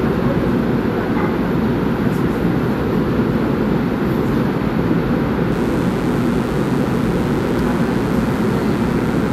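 At 5.52 s a mains buzz enters and continues to the end of the clip. A switching source, such as a dimmer, rectifier or unshielded run, is injecting sharp spikes twice per cycle of a 60 Hz supply, so the interference is a dense series of 60 Hz harmonics extending into the kilohertz range. It sits roughly 20 dB below the wanted sound and is heard as a steady, raspy buzz underneath it.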